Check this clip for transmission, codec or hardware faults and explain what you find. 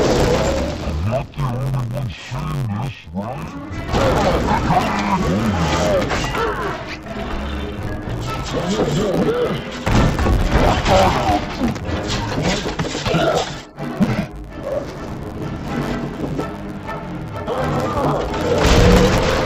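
There is one fault, present throughout: interleaved audio read as planar. Alternating left-right samples in each 10.67 ms block, which fits a 512-sample buffer, are split into halves, leaving the sound dull and robotic with a 93.8 Hz buzz.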